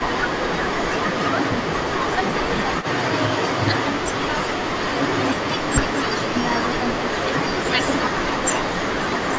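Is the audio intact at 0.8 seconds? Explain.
No. From 0.74 to 0.84 s the speech dips by about 10 dB, which is likely speech suppressed in double talk: the echo canceller turned down the talker along with the far side's echo.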